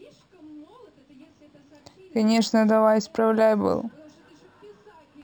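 Throughout the speech there is a faint metallic shimmer on sibilants and a dulled top end. This is imaging from linear upsampling: the rate was raised from 12 kHz to 48 kHz by straight-line interpolation, leaving mirror images between 6 and 12 kHz, roughly 25 dB down.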